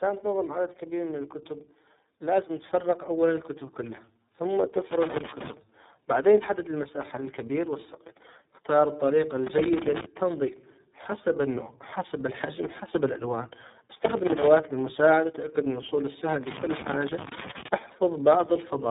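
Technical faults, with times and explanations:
Throughout: tandem speech coding. The speech passed through a GSM full rate coder, then G.711 mu-law, then iLBC, with two lossy speech coders in series re-encoding already degraded output. It sounds rough, muffled and warbly, with nothing above about 3.8 kHz.
0.79 to 4.07 s: automatic gain rising. The gain control judged the input too quiet and raised its gain gradually by about 8 dB over roughly three seconds. Speech and background noise swell together, as both pass through the same gain stage.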